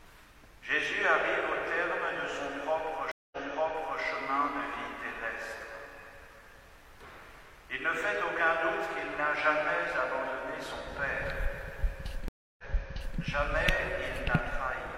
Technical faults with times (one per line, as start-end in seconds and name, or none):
3.11-4.02 stream reconnect
12.28-13.19 stream reconnect